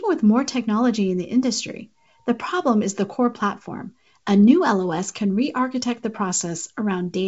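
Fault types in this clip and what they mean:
There are no fault types in this clip, as the G.722 wideband telephone coding at 64 kbit/s is working as intended.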